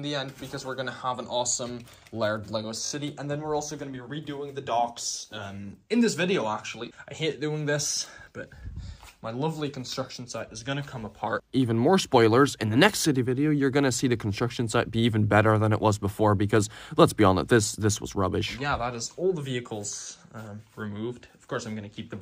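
At 2.86 to 2.92 s a repeated buffer occurs: fresh audio failed to reach the output in time, so the device replayed its last 20 ms block three more times. Each hard join clicks, giving a brief buzzy stutter, with essentially nothing missing from the sound afterwards.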